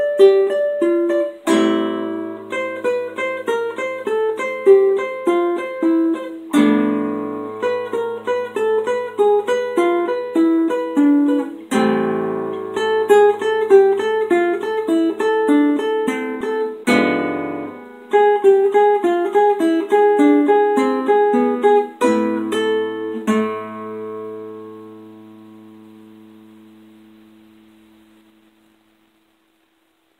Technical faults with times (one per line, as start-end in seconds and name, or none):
none